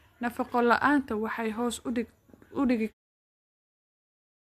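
No technical faults are audible.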